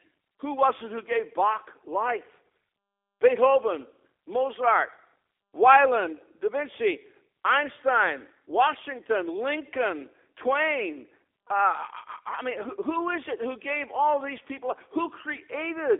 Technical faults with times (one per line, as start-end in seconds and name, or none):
0.00-16.00 G.729 codec